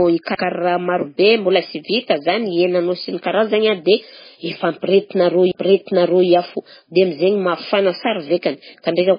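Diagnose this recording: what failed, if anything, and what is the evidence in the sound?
The codec stage failed. Throughout the speech, nothing is heard above 5 kHz, and the sound carries heavy watery, swirling artefacts. This is likely MP3 compression at a very low bitrate, consistent with roughly 16 kbps. With too few bits, the encoder drops weak spectral lines, so they flicker on and off from frame to frame and produce the swirl. It also discards everything above a fixed cutoff, which removes the top of the band.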